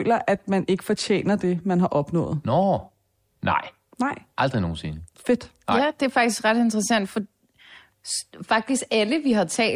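No technical faults can be heard anywhere in the recording. Nothing in the speech points to a problem in how it was captured, processed or delivered.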